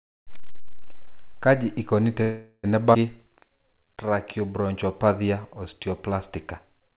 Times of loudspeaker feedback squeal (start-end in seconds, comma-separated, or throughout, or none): none